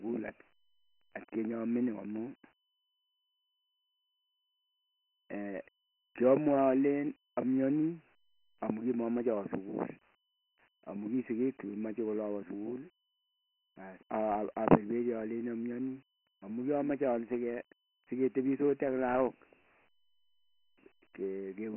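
Throughout, the speech sounds thin and gritty, with a hiss riding on every syllable and nothing above about 3.1 kHz. This is Dialogic VOX ADPCM: heavy 4-bit coding at a rate consistent with 24 kbps, squeezed into a 200 Hz to 3.5 kHz phone band.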